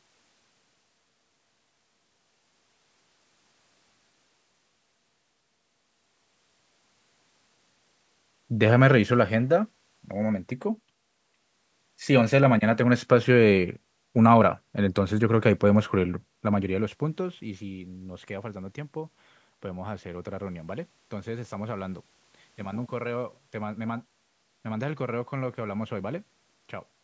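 No technical faults are audible.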